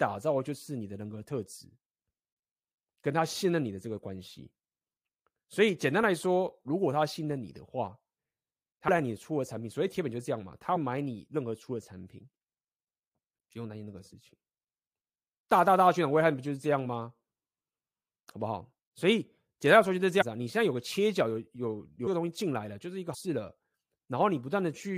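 Brief smeared blips where the speech lurches forward occur at 8.87 s, 10.75 s, 20.20 to 20.23 s, 22.06 s and 23.13 s, skipping roughly a fifth, a seventh, a seventh, a tenth and a fifth of a second. These are compressed frames skipped. Whole frames were dropped, and the jump sizes fit multiples of a 23.2 ms frame.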